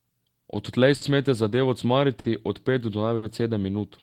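Speech that sounds slightly dragged and uneven from start to finish, with a tempo that never quite settles, is the mark of clock drift between sender and receiver: the sender's clock runs roughly 5% slow, so the receiver's jitter buffer keeps draining and the playback has to keep patching the gap. From 0.12 to 0.80 s, just before "smete zadevo", the sound is played at 95% speed with small hiccups. These are repeated timing corrections in which the receiver repeats short pieces and stretches the passage by about 40 ms to stay in step. Three brief holds, each a sustained sound with a faint buzz or dip, occur at 0.95–1.03 s just before "smete zadevo" (60 ms), at 2.19–2.26 s between "smete zadevo" and "od pet" (50 ms), and at 3.16–3.24 s (60 ms). Each is a short stall from a late packet. The buffer ran empty, the last sound was held until data arrived, and nothing was lost.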